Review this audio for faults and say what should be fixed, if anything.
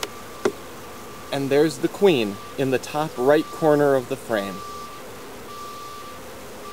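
A harsh, buzzy grit rides on the sound from start to finish, and the quiet stretches never fall silent but fill with a constant gritty noise. This is likely a stuck bit: one bit of each sample held permanently at 0 or 1 by a broken data line or converter, so about half the samples land off by a fixed step of around -40 dBFS in a pattern that tracks the waveform, while small values near zero flip that bit as they change sign, which is what fills the gaps with noise. To prevent it, check the converter and its digital connections with a bit-activity meter or a low-level test tone before recording, and replace any faulty cable or interface.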